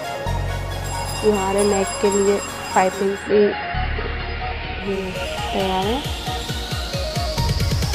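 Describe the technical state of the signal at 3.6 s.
At 3.6 s the receiver is in digital radio blending to analogue (2.89 to 5.23 s). After a 441 ms cross-fade, the AM fallback cuts the treble, adds faint hiss and drops about 1 dB, unlike a plain low-pass filter.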